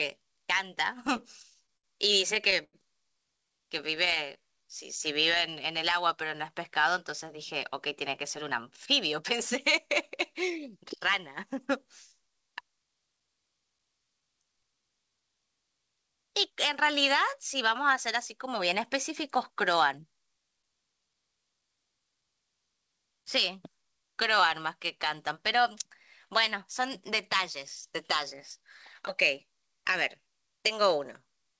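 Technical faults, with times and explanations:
1.07–4.39 s, repeated stalls (stutter): the audio halts 18 times as packets arrive late and the jitter buffer empties. Each gap is filled by stretching the last sound, longest about 93 ms, 307 ms in all. Nothing is lost, but the sound drags and stutters.
3.38–6.28 s, jitter buffer slow-down: overlapping the end of the stutter, the receiver rebuilds its reserve by repeating single pitch periods and pause fragments, adding 123 ms. The audio plays at 96% speed with pitch unchanged, so sounds come out slightly drawn-out.
8.23–11.68 s, jitter buffer speed-up: with too much audio queued, the receiver trims short pitch-period slices one after another, removing roughly 150 ms. Playback runs at 104% speed at the same pitch.
14.05–15.21 s, jitter buffer slow-down: a sharper stretch at 93% speed, where 86 ms of repeated pitch periods and pause material are inserted to refill the buffer. 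Pitch holds steady, but sounds are audibly lengthened and may carry a slight warble.
17.13–21.60 s, jitter buffer speed-up: the buffer again holds more than its target, so the receiver cuts repeated small pieces totalling roughly 200 ms. The audio runs at 104% speed without any pitch change. Across the clip, the G.722 call path leaves nothing above 8 kHz.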